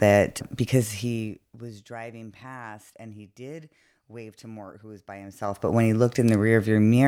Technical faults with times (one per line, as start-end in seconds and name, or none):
0.76-1.80 zipper noise
5.24-5.72 zipper noise